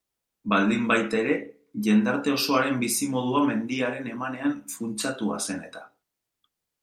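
No technical faults can be heard anywhere in the recording.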